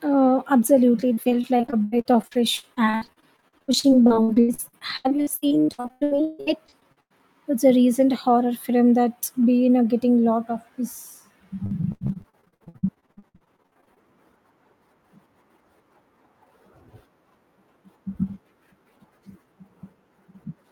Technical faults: repeated packet loss (robotic sound)

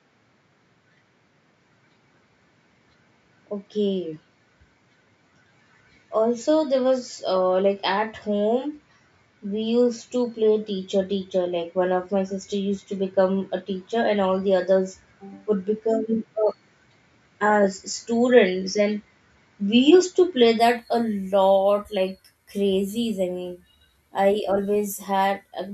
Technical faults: input switched to a poorer device

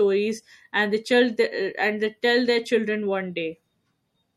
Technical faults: MP3 compression

